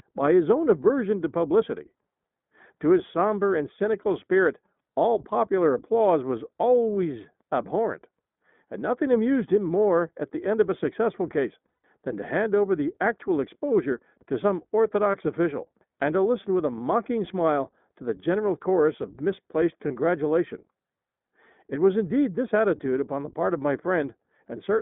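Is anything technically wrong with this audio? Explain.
Yes. The speech has three technical faults.

Throughout, a channel delay causes comb filtering. One channel arrives late by a fraction of a millisecond, around 0.2 ms, before the two are summed to mono. Content common to both cancels at evenly spaced frequencies. The first notch sits near 3 kHz. A delay this short gives a fixed, hollow, phasey colour rather than any doubling. The upper part of the voice sounds scooped out.

The whole clip also carries plainly audible iLBC codec damage. The line band runs from 200 to 3500 Hz, so nothing above roughly 3.5 kHz survives. The sound fits iLBC at about 15.2 kbps with 20 ms frames. Each frame's excitation is coded on its own, without relying on the previous frame. The result is narrowband speech that stays clear but sounds rough and synthetic.

There are three spots of lost iLBC frames. The first runs from 11.69 to 11.85 s, between "of a successful case" and "than to hand over". 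About 140 ms is missing, scattered over 160 ms, with the longest run roughly a tenth of a second. Single 20 ms losses follow at 15.12 s, after "actual exposure to some", and at 19.88 s, after "general chorus of misplaced". The decoder fills each gap by repeating the last pitch cycle mixed with noise. This is heard as a held, buzzy or breathy vowel. Because frames stand alone, the voice recovers almost immediately.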